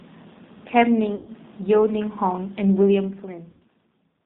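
Throughout, the speech has a thin, slightly rough and synthetic quality with nothing above 4 kHz. This is plainly audible G.729 codec damage: at 8 kbit/s the decoder rebuilds each 10 ms frame from a vocal tract filter, a pitch predictor and a handful of pulses, so fine texture and high-frequency content are lost.

From 1.15 to 1.31 s the speech smears into a buzzy tone or coloured noise that fades away, and it comes back weak and distorted before recovering. The same happens from 3.51 to 3.63 s. This is VoIP packet loss concealed by the speech codec. About 120 ms of audio was lost in the first gap and about 90 ms in the second, which fits four and three dropped packets respectively. The decoder filled each gap by extrapolating its last pitch and filter at steadily falling gain, and because each frame builds on the previous one, the speech stays degraded briefly after the packets return.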